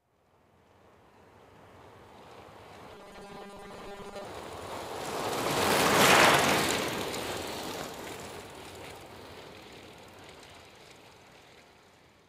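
Everyday sounds, with robotic sound from repeated short buffers between 2.94 and 4.24 s: a rigid metallic 200 Hz buzz, likely from roughly 5 ms chunks looping over most of the audio. On a spectrogram it shows as evenly spaced 200 Hz harmonic lines; on a waveform, identical repeating cycles.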